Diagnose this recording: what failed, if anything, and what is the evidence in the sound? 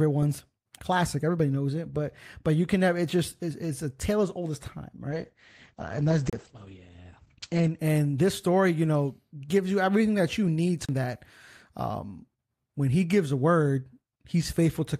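From 5.11 to 7.85 s the audio turns rough and muffled. The top end is cut at about 8 kHz, then full bandwidth returns before "this story you know". This is a call bitrate drop at the call-processing and codec stage. The encoder was throttled, consistent with a fall from roughly 48 to 10 kbps, and it coded coarsely and narrowed the band.

A tick, a very brief mute and an abrupt jump in the audio occur at 6.30–6.33 s and again at 10.85–10.89 s, between "everything that you need" and "that um". These are CD skips at playback. The laser jumped tracks, muted momentarily and resumed from a displaced position on the disc.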